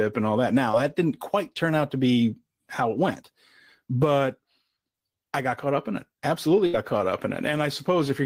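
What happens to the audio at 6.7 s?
From 6.66 to 6.75 s the speech stalls: the last sound is held and fades for about 74 ms, then resumes with about 80 ms skipped. This is a burst of packet loss, where the receiver extended and faded audio to cover consecutive missing packets.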